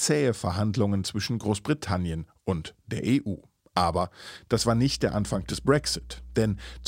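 From about 4.52 s to the end of the speech, mains hum comes in: a steady 60 Hz tone, fairly prominent at roughly 15 dB under the signal. Something like a ground loop or a nearby transformer is leaking the power line into the audio path.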